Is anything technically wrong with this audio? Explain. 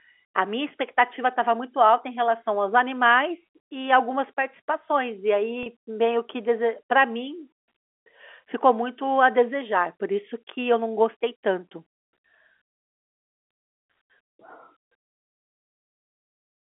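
Yes. At 5.63 to 5.66 s there is packet loss with pitch repetition: about 30 ms of audio went missing, which fits three lost 10 ms packets. The receiver filled the gap by repeating the last pitch period, so the sound briefly holds with a slightly buzzy, frozen quality. On a waveform, identical repeated cycles appear. A spectrogram shows the harmonics running flat and unchanged across that gap. The audio has the narrow 300 to 3400 Hz band of G.711 telephone coding.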